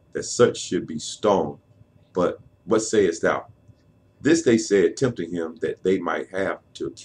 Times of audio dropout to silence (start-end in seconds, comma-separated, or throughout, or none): none